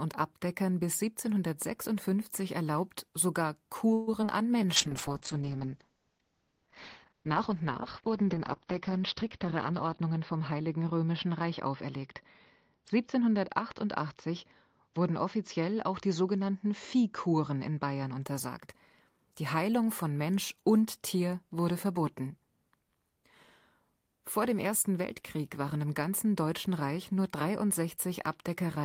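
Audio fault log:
3.93–4.30 s repeated packet loss (robotic sound): four quick gaps, the longest 139 ms, patched by extending the last sound, so nearly half the span turns choppy.
4.39–4.69 s jitter buffer slow-down: repeated pitch periods add 39 ms, so the audio runs at 89% speed at unchanged pitch, drawn out.
4.78–18.30 s call bitrate drop: coding falls from 32 to 8 kbps and bandwidth from 20 kHz to 6 kHz, bottoming out for about 4.8 s, so the sound turns muffled and watery.
9.04–10.60 s jitter buffer speed-up: around 150 ms of short pitch-period pieces are cut, so the audio runs at 109% speed, hurried at the same pitch, the reverse of the slow-down.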